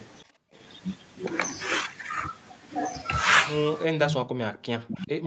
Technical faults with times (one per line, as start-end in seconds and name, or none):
0.40-0.45 speech suppressed in double talk
3.86-5.26 speech suppressed in double talk
4.05-4.23 echo leak
4.53-4.58 echo leak
4.88-4.95 echo leak